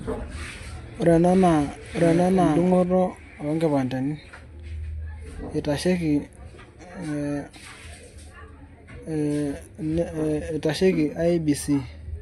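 From the first moment until 2.84 s the speech plays over a doubled audio track: a second full-band copy trails about a second behind at roughly the same loudness, then vanishes abruptly. Unlike a room echo, this delayed copy has no decay tail, no reverberant colouring and only one repeat. That points to the same signal likely being mixed in twice, either through a slower second capture path or an edit leaving two copies out of step.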